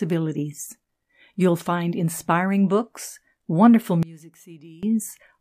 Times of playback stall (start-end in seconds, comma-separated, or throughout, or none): none